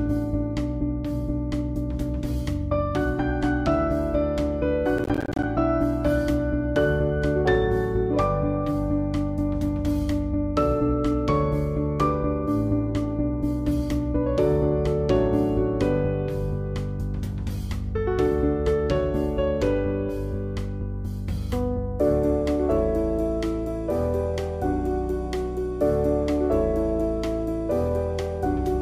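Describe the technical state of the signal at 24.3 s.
At 24.3 s the signal is intact, with no dropout, distortion, glitch or other fault audible at that moment.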